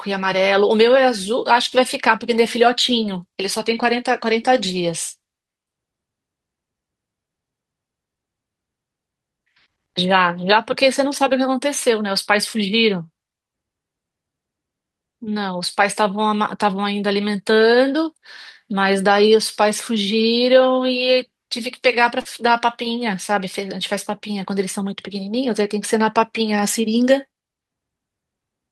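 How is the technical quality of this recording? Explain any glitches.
One glitch stands out: a brief smear at 22.21 to 22.27 s, where the speech wobbles and a short sound may drop out. This is short concealed packet loss. About 40 ms of audio arrived too late, and the receiver covered roughly 35 ms by extending the preceding sound before blending back into the real signal.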